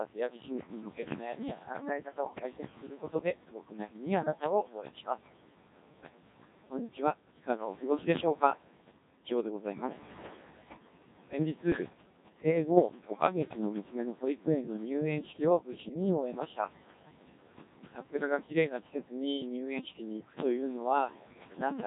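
Speech runs through a noise suppressor that pulls the steady room noise, sitting about 10 dB below the voice, down by about 20 dB between phrases, letting it pump back up under speech. The whole clip carries heavy Codec 2 vocoder damage: buzzy, robotic synthesis from pitch and envelope parameters, with a coarseness that fits the 1.6 kbit/s mode. Bit errors on digital voice radio strike from 2.24 to 2.43 s and from 11.72 to 11.90 s. Corrupted bits, around 7 percent, scramble the pitch, level and spectrum of a few frames, producing bleeps and warbling gibberish.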